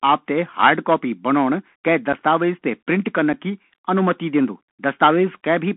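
The whole clip carries the Bluetooth CVSD headset codec sound, probably a 64 kbps link. The speech sits in a narrow 150 Hz to 3.4 kHz band, with scratchy s sounds and a grainy hiss underneath. You'll hear unconcealed Bluetooth headset packet loss twice: at 2.13 to 2.15 s, just before "ते प्रिंट कन्ना", and at 3.33 s, right after it. Each is a single lost packet of about 7.5 ms, leaving an abrupt little hole.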